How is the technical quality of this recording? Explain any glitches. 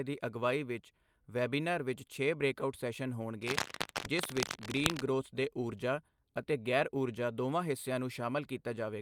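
The recording has one clear glitch, a stretch of cable scratch noise in the speech. From 3.42 to 5.01 s, just after "ਵਿੱਚ ਛੇ ਬ੍ਰੇਕਆਉਟ ਸੈਸ਼ਨ" and ending before "ਗ੍ਰੋਥ ਦੇ ਊਰਜਾ ਅਤੇ", dense, irregular scratching and rustling sits over the speech, nearly as loud as it. The likely cause is a worn cable or connector being moved, its contact resistance fluctuating rapidly. Unlike isolated digital clicks or a clean dropout, the noise comes as dense, uneven bursts layered on top of the signal, with no gap in the speech.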